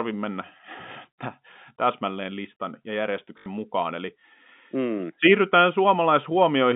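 At 3.38 s the speech breaks into a robotic stutter lasting 80 ms, to 3.46 s: packet loss with the last packet repeated. Unlike a silent dropout, one fragment is replayed, buzzing near 50 Hz, which fits four lost 20 ms packets.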